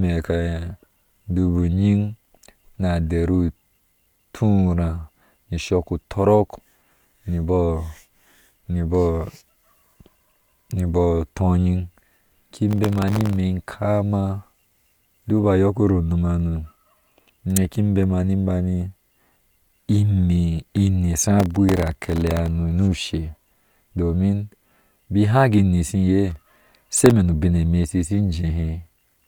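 A speech recording with three bursts of processor overload crackle, from 12.69 to 13.36 s, from 21.40 to 22.48 s, and from 26.30 to 27.11 s. Each burst is a gritty tearing laid over the voice. The processor is falling behind on very short buffers, well under a millisecond each, and missing dozens of deadlines in a row. Each miss repeats a scrap of old audio with hard edges. The crackle stops when the load clears.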